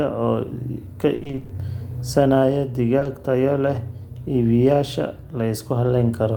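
A speech recording marked by repeated packet loss (robotic sound) from 1.15 to 1.51 s, where eight gaps, the longest 60 ms, were patched by extending earlier audio, leaving over half that stretch concealed and choppy. A spectrogram shows smeared, repeated harmonic bands and abrupt breaks. Short concealed packet loss then hits twice, at 2.99–3.03 s and 3.03–3.07 s, just before "tayo leh", each filling about 20 ms with continued sound, heard as a brief wobble and visible as a small smeared blur in the waveform.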